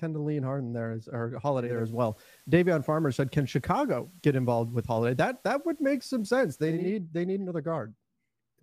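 From 1.56 to 6.94 s, after "there as or" until "they need another", hiss rises and level shifts about 2 dB: digital radio blending to analogue FM over 341 ms.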